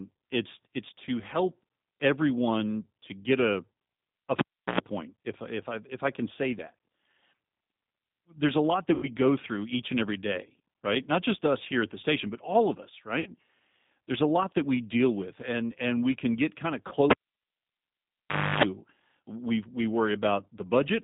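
Throughout, the speech passes through a G.729 codec, most likely the G.729A variant at 8 kbit/s, which rebuilds each 10 ms frame from a vocal tract filter, a pitch predictor and a handful of pulses. Everything above about 3.7 kHz and below about 150 Hz is gone, and the coding damage is plainly audible. The speech sounds rough, thin and slightly synthetic across the whole clip.

At 4.39 s a cable is pulled and plugged in. The connection breaks for about 0.37 s, leaving a pop and near silence. Then, as the plug tip touches before seating, about 0.1 s of 60 Hz mains buzz comes through, and a second pop marks the sound returning at 4.80 s.

VoIP packet loss concealed by the speech codec follows at 8.94 s, 13.20 s and 16.88 s. The missing stretches are 90 ms, 60 ms and 30 ms long, which fits three, two and one lost 30 ms packets. At each gap the decoder keeps extrapolating from its last pitch and filter while lowering the gain, so the speech smears into a fading buzzy tone or coloured noise. 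Because each frame builds on the last, the sound stays weak and distorted briefly after packets resume, ending by 9.09 s, 13.30 s and 16.94 s respectively.

A second cable pull starts at 17.10 s and lasts longer. A pop opens about 1.5 s of near silence, then roughly 0.3 s of 50 Hz mains buzz as the tip makes partial contact. A final pop follows when the signal returns at 18.63 s.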